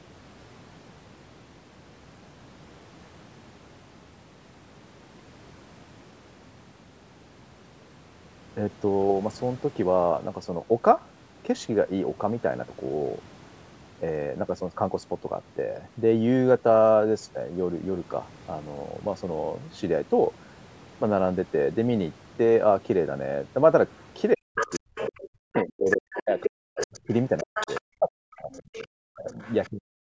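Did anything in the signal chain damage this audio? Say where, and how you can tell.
Yes. The damage sits in the call processing stage, and the likely cause is an echo canceller that left residue. Other side's voice leaking through appears at 23.97 to 24.05 s, faint at roughly 40 dB under the speech. It returns far stronger from 24.56 to 27.81 s, only about 5 dB down. Shorter leaks follow at 28.52 to 28.87 s and 29.31 to 29.69 s, around 20 to 25 dB down. A loudspeaker echo is reaching the microphone uncancelled.

Speech suppressed in double talk shows up in three stretches: 24.34 to 27.1 s, 27.43 to 29.38 s, and 29.7 s to the end. The talker's speech dips or drops out in pieces, falling by up to roughly 40 dB. About two seconds are lost in the first stretch, one in the second, and a few tenths in the last. The first two stretches overlap the leaked far-end speech. That points likely to the canceller muting both sides when it could not tell them apart.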